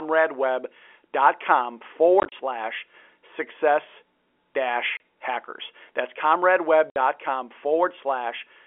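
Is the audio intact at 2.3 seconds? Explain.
No. From 2.2 to 2.32 s, just before "slash success", there is packet loss filled with silence: about 70 ms of dropouts scattered across 120 ms, the longest 30 ms, consistent with 10 ms packets. The speech is chopped by hard-edged holes that show as flat waveform gaps and blank spectrogram columns edged by vertical broadband lines.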